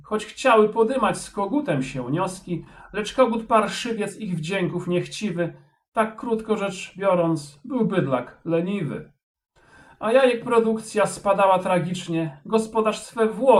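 At 2.64 s a short stretch of packets arrived too late to be decoded, producing a short concealed packet loss that runs to 2.68 s. The receiver covered the gap by extending the sound that came just before it, synthesising about 13 ms of substitute audio, while around 10 ms of the real signal never arrived and roughly 14 ms was removed. The result is a brief smear at that point.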